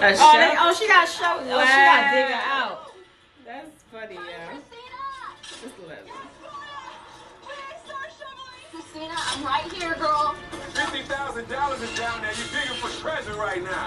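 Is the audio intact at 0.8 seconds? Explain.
Yes, the audio is intact at 0.8 seconds, with no fault present at that moment.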